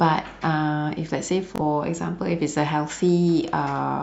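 At 1.56 s the speech breaks into a brief Bluetooth stutter lasting until 1.61 s. Audio data over the wireless link arrived late or not at all. The receiver filled the gap by replaying its last buffer. That gives a short, rapid repeat, a quick buzzing stammer. About 43 ms of audio is lost, which points to two dropped frames. When the speech resumes, it has jumped ahead past the missing stretch.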